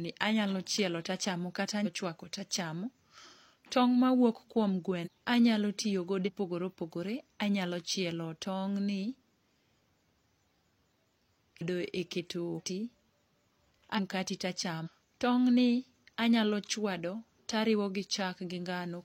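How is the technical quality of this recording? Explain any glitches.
The speech is interrupted by seven skips where compressed frames are skipped, at 1.81, 5.02, 6.23, 11.57, 12.54, 13.94 and 14.82 s. At each, whole frames are not played, so the speech jumps ahead, losing a fraction of a second up to about a second. The gaps fit frames of about 46 ms.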